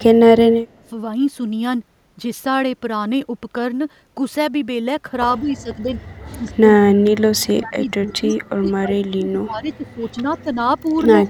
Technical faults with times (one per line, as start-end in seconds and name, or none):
0.52-0.85 speech suppressed in double talk
5.39-5.93 speech suppressed in double talk
6.37-8.33 speech suppressed in double talk
8.31-8.36 echo leak
8.60-10.56 speech suppressed in double talk
10.81-10.86 speech suppressed in double talk
11.14-11.29 speech suppressed in double talk